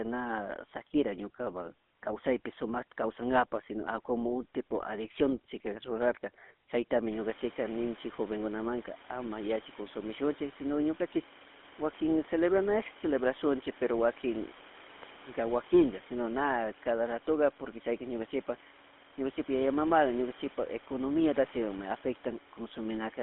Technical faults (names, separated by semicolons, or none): GSM full-rate codec